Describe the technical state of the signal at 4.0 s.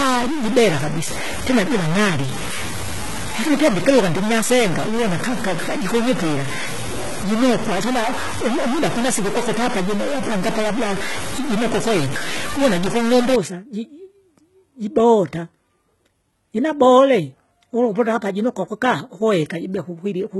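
At 4.0 s the speech carries distortion, most likely a stuck bit, running from the start of the clip to 13.36 s. One bit in each sample appears held at a fixed value, so roughly half the samples are offset by that bit's weight in a pattern that follows the waveform. The result is distortion on top of the signal, and quieter stretches fill with noise instead of falling silent.

Underneath that, the whole recording shows heavy HE-AAC compression damage. Here the likely cause is a low-bitrate encode, consistent with around 16 kbps. Only the lower spectrum appears properly coded, and the treble is rebuilt by spectral band replication, with lower bands copied upward under a coarse envelope. The upper harmonics therefore don't align with those below the crossover, and sibilants sound metallic and lispy. Nothing is present above 11.8 kHz.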